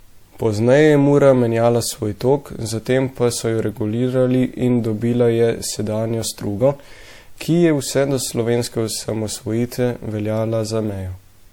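Throughout the speech, the sound points to transcoding between lossy codecs, likely a low-rate MP3 re-encoded as WMA. The second codec wastes bits on the first one's artefacts and adds its own, so both kinds of artefacts are heard together, with nothing above 20 kHz.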